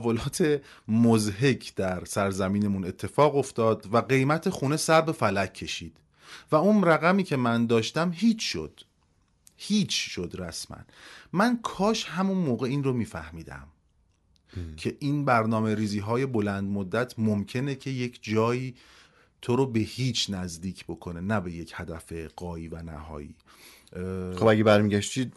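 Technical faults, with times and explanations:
No technical faults found in this speech recording; nothing to log.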